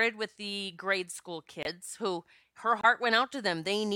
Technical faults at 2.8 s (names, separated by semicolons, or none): corrupt frame muted